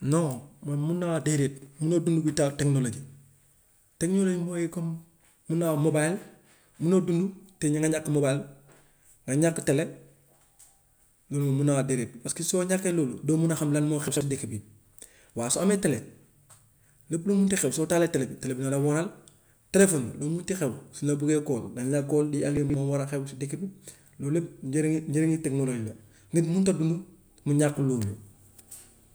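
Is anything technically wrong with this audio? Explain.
Yes. Chunks out of order occur at 1.58–1.66 s (before "munoo dund without"), 14.08–14.21 s (between "a xam lan moo" and "dëkk bi") and 22.57–22.74 s (after "lay call lii ak"). A 43 ms block plays one, two, then three blocks late. Each spot sounds briefly jumbled.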